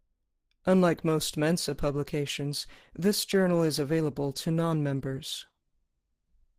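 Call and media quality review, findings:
Adaptive stream at a lower bitrate from 0.89 s to the end: sudden rise in codec artefacts, smeary speech, no gap. Sounds like a drop from Opus around 64 to 16 kbit/s.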